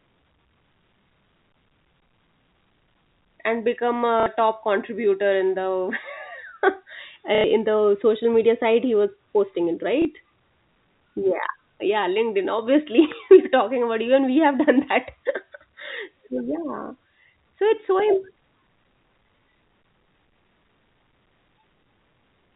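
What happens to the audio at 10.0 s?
A brief blip from 10.02 to 10.05 s, caused by packet loss with last packet repeated: 30 ms of audio was replaced by a replay of the preceding chunk.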